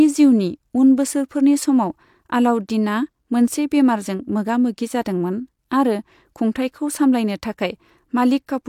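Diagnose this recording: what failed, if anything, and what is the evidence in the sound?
No fault detected in this recording.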